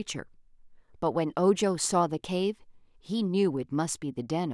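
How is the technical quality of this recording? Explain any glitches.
No audible glitches or faults.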